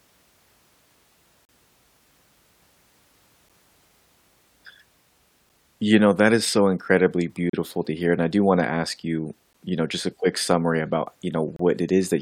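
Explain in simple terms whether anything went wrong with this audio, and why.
Something did go wrong: the speech has a gap between stream segments roughly every 2 seconds, at 1.45 to 1.49, 3.49, 5.49, 7.50 to 7.53 (right after "that is so incredibly"), 9.53 and 11.56 to 11.60 seconds. The audio arrives in 2-second chunks whose timing doesn't quite line up, so the player fills each gap with silence. You hear a sharp-edged dropout of about 6 to 38 milliseconds, and no speech is actually lost.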